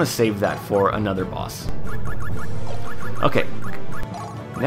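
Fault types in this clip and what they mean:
DC step: the waveform's zero line jumps by about -16 dBFS at 1.69 s and holds until 4.03 s, giving a low thump at each change.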